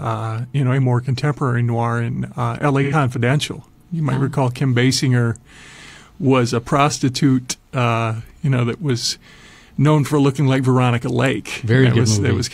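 At 2.83 s an AAC frame loss with concealment interrupts the speech. Compressed data went missing, and the decoder filled the gap by reusing the spectrum of the last good frame rather than going silent. For about 85 ms, up to 2.93 s, the sound turns smeared and noisy, with a phasey colour. That span fits two lost frames. Normal decoding then resumes.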